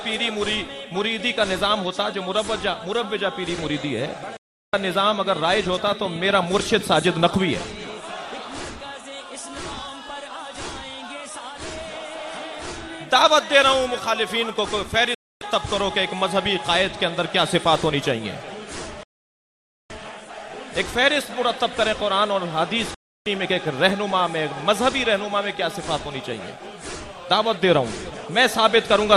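At 4.37 s the receiver stops getting valid frames, a digital broadcast dropout: it mutes within about 3 ms, leaving a hole of 0.36 s before the sound snaps back. From 5.88 to 7.27 s a train of clicks runs, around twenty sharp ticks at an irregular pace of about 14 per second, roughly as loud as the programme itself, likely from interference or a struggling interface. The same muting dropout returns at 15.14 s for 0.26 s, at 19.03 s for 0.86 s, and at 22.94 s for 0.31 s, each cutting cleanly to silence with the missing audio simply gone.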